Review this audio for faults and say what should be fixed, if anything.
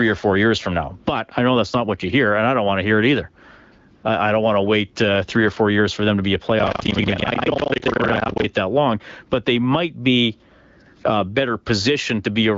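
AMR comfort noise appears from 3.95 to 4.03 s, just before "I don't want to". For 80 ms no speech frames arrive, so the receiver substitutes synthetic noise built from a rough level and spectrum estimate, and the real background drops out. On a spectrogram this looks like a short, featureless, evenly smeared noise band with hard edges. In the waveform it is a flat, low-amplitude patch. Prevent it by tuning or disabling voice activity detection and discontinuous transmission so that brief pauses keep real frames.

Buffer tearing runs from 6.56 to 8.45 s, between "them to be a" and "that long but they". The writer and reader of the ring buffer have drifted so that they cross in every period. About half of each buffer replays audio from roughly a tenth of a second earlier, and the joins between old and new audio are hard. The result is a 25 Hz robotic rattle, which fits a 40 ms period. It is present only while the sound is active. 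A spectrogram shows vertical discontinuity lines every 40 ms and duplicated harmonic fragments. The waveform shows abrupt steps at each join. Prevent it by locking the write and read pointers and recovering properly from xruns. The AMR-WB link at 12.65 kbit/s adds only light coding colouring.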